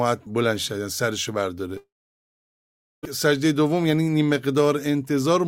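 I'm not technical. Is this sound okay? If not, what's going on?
No. From 1.77 to 3.05 s the sound trails off into a brief fading buzz or hiss, then goes silent for over a second. This is likely a long network dropout. Unlike a quick glitch, about 1.3 s is lost, and the sound resumes later rather than where it stopped.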